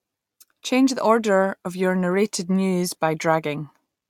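No technical faults can be heard in the speech recording at any point, and the signal stays continuous and steady throughout.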